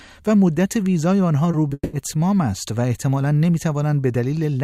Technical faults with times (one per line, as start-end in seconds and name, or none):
1.51-1.73 short concealed packet loss
1.73-1.95 long network dropout